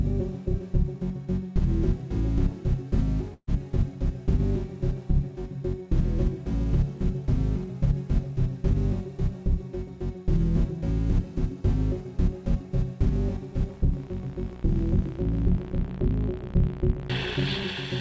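A recording of everyday sounds with a burst of packet loss from 3.34 to 3.49 s. About 130 ms is filled with a fading continuation of the last sound, then about 50 ms of silence, and about 140 ms of audio is skipped. On a spectrogram this shows as a smeared, decaying band with a blank column where the sound jumps ahead. The spectrum stops at 8 kHz, which fits a G.722 call path.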